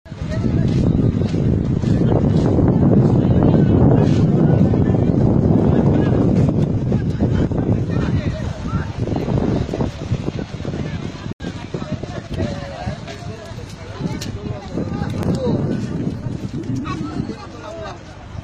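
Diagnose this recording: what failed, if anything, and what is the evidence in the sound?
A block of digital silence was inserted twice, most likely because the output buffer was not filled in time: a 73 ms hole from 11.33 to 11.40 s and an 8.8 ms tick at 15.23 s. Each edge cuts with no fade, unlike a network dropout's smoothed concealment.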